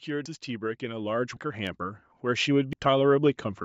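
From 0.05 s to 3.38 s, automatic gain rising lifts the level by about 15 dB, with background swelling alongside the speech, unlike a speaker simply getting louder. At 0.26 s, 1.37 s and 2.73 s, the sound jumps abruptly forward with no silence, losing roughly 150, 100 and 100 ms, likely a dropped buffer (overrun) rather than a dropout gap.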